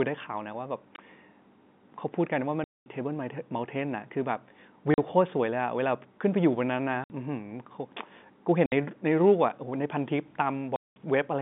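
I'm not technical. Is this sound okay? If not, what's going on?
No. The fault is packet loss filled with silence, at 0.96 s, 2.64–2.86 s, 4.94–4.98 s, 7.04–7.10 s, 8.66–8.72 s and 10.76–10.96 s. The speech travels in small chunks, and some chunks never arrived, so the receiver played nothing in their place. Every hole is a multiple of 20 ms, which fits 20 ms chunks, and its abrupt start and stop can click. The two longest gaps, at 2.64 s and 10.76 s, each last about a fifth of a second.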